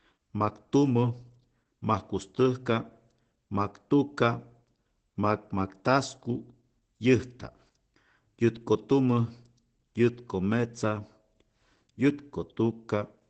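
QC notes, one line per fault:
Throughout, Opus voice compression: the speech has nothing above 8.5 kHz, so it's dull and muffled, with a hoarse, slightly robotic grain that's plainly audible. The SILK coder is coding the excitation coarsely, which fits a wideband setting at around 12 kbps.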